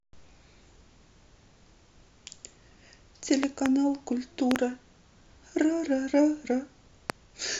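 At 3.43 s a loud pop breaks into the speech. It is a double pop lasting until 3.68 s, peaking about 10 dB above the speech. Another double pop follows at 4.51 to 4.58 s, about 15 dB up. A single sharp pop lands at 7.10 to 7.12 s, also about 15 dB up. Each is likely a sudden voltage spike, from a switch, static or a driver glitch. The speech continues underneath each pop.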